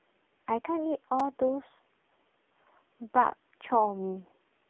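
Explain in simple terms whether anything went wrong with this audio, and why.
AMR narrowband mobile codec, heard through the whole clip: the speech has passed through a low-quality phone codec that rebuilds the voice from a simple model. Nothing above about 3.6 kHz survives, so it sounds muffled, buzzy and noticeably synthetic.

Repeated buffer, at 1.2 s: new audio arrived late, so the player filled the gap by replaying its last tiny chunk, about 4 ms long, two extra times. The result is a brief click or buzz with hard joins where that snippet repeats.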